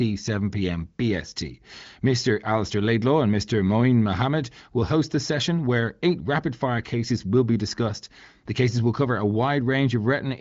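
No technical faults can be heard in this speech clip, which comes through an AMR wideband (HD Voice) connection at 18.25 kbit/s with nothing above about 7.5 kHz.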